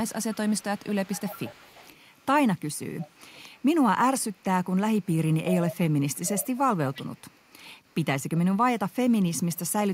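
Echo leak at 0.05–2.26, 2.57–3.65, 4.2–5.09, 5.47–5.77, 6.14–8.38, 8.9–8.95 and 9.4–9.59 s: a copy of the speech delayed by 347 ms, likely from loudspeaker pickup the echo canceller missed. It is strongest near 5.5 s and much weaker near 4.2 and 8.9 s.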